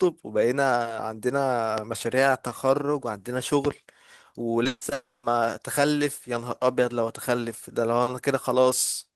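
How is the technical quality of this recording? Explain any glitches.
The recording has three loud pops in the first four seconds and a cluster of network losses between about 4.63 and 5.25 s that briefly break up the speech.

Loud pop: A single sharp pop lands at 1.78 to 1.80 s, then a double pop runs from 3.65 to 3.73 s. Both sit on top of the speech, which continues underneath. The first peaks about 15 dB above the speech level and the second about 10 dB above it. The likely cause is an electrical pulse, such as a plug, switch, static discharge or driver glitch, entering the signal chain, with the following circuitry shaping each pulse into a thump.

Short concealed packet loss: At 4.63 to 4.67 s and again at 4.89 to 4.93 s, there is a quick smear or wobble lasting about 20 ms each time. A small piece of the call arrived too late to be decoded. The receiver covered the gap by extending the preceding sound, using its pitch or shaped noise, and then cross-faded back into the real audio.

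Burst of packet loss: Immediately after the first short loss, from 4.67 to 4.83 s, the speech turns into a held buzz or hiss that fades away, with about 40 ms of near-silence before the audio resumes. Around 140 ms of consecutive audio failed to arrive. The receiver stretched the last sound and ramped it down, so the sound picks up further along with that stretch missing.

Long network dropout: From 4.93 to 5.25 s, the sound again stretches into a fading buzz or hiss and then drops to silence for about 200 ms before the speech returns. Roughly 300 ms of audio never played. This is likely a stall in the network path. Concealment can only extend the last sound for a short time, so it fades out and leaves a gap until fresh packets arrive.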